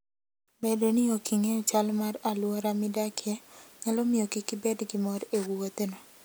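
Speech recording; no audible technical faults.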